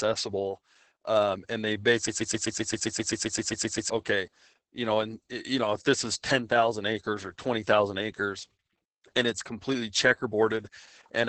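Opus voice compression runs through the whole clip. The speech sounds muffled, hoarse and slightly robotic, fitting SILK coding at roughly 10 kbps.

From 2.08 to 3.9 s, a broken-record loop repeats one 0.13 s fragment 14 times back to back. A stalled stream is the likely cause. The speech due in that span is lost.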